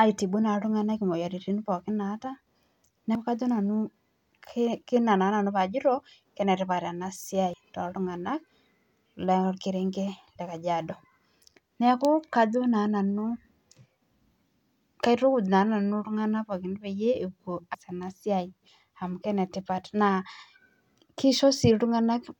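Damaged data in the compressed speech stream throws the decoder off its frames, and each time it has to hunt for the next header, producing brief chirps or blips: at 3.15 s, at 7.54 s just before "too iltung'ana", and at 17.71–17.75 s before "ena siai amu enetipat".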